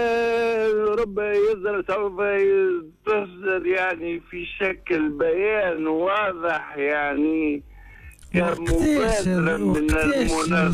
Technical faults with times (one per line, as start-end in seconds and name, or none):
2.15-10.73 time-stretched section